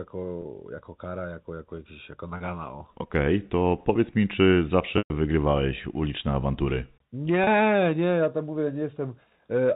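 A brief held, buzzy smear interrupts the speech at 0.42 s, 2.37 s and 7.44 s, each lasting about 30 ms. At 4.98 s a longer one runs to 5.10 s, fading toward silence before the speech cross-fades back in. This is packet loss with pitch repetition. The receiver bridged each gap by repeating the last pitch period and fading it out. The 120 ms gap fits several consecutive lost packets. The narrow telephone band of the G.711 coding remains audible throughout.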